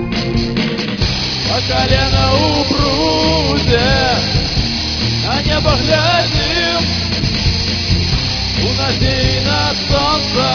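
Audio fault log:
Nothing to log here; I listened all the way through and didn't hear anything that counts as a fault.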